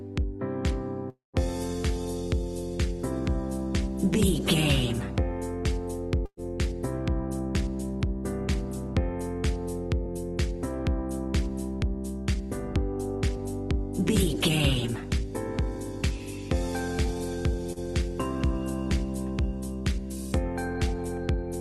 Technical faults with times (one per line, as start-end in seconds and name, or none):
1.09-1.37 call audio freeze
6.26-6.40 burst of packet loss
11.84-17.53 jitter buffer speed-up
17.73-17.79 short stall from a late packet